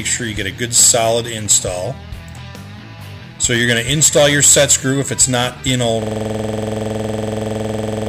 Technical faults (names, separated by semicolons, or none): system hang loop